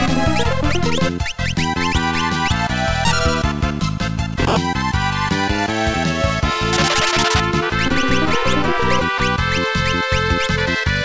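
From 4.18 s to 5.36 s there are GSM signalling bursts: a 2G phone nearby sends short groups of radio bursts while it sets up, and the audio circuit rectifies them into the signal. The result is a galloping dit-dit-dit of ticks and brief buzzes at about 217 Hz, sitting roughly 20 dB below the wanted sound. It has no musical or acoustic relation to the sound itself.

At 5.36 s the pattern turns continuous and becomes GSM phone buzz, running until 6.92 s. The phone is now transmitting in a call, bursting 217 times a second, and the rectified pulses form a hard, raspy 217 Hz buzz with a dense stack of harmonics, about 21 dB below the signal. The buzz is nearly steady rather than coming and going, which fits a phone in an active call.

Two very short gaps follow, from 7.70 s to 7.72 s and from 9.18 s to 9.20 s. Each is 20 ms of sound dropped by the voice detector. The sender's detector likely judged that stretch to be background, stopped sending, and the receiver filled the hole with comfort noise. 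Each gap is heard as a brief slip into steady noise or near silence before the sound resumes. The codec path is G.722 at 64 kbps, so nothing above 8 kHz is present.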